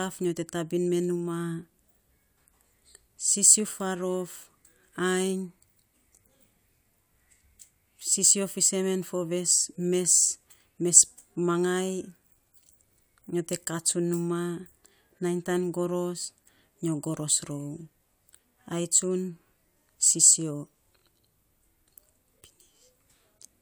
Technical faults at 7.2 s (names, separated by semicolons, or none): none